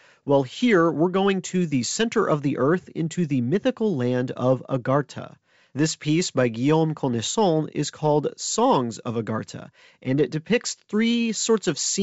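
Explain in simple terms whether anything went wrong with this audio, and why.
Nothing went wrong here: the speech simply comes through the G.722 wideband telephone coding the way a good phone call should, with no fault to point to anywhere in it.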